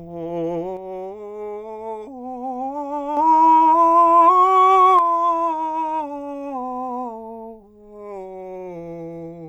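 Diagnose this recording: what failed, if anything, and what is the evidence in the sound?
The music falls abruptly by about 6 dB from 0.77 to 3.17 s, then again from 4.99 s to the end. That's one channel dropping out, likely an intermittent connection in the analogue wiring, leaving half the mono sum.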